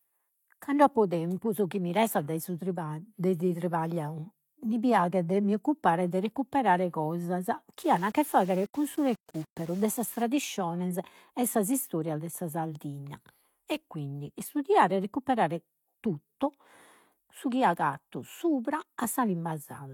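From about 7.79 to 10.23 s the speech turns grainy, with a gritty distortion that tracks the level and sputters on the quietest bits. That's low bit depth without dither, likely rounding to around 7 bits, leaving the error only about 25 dB down.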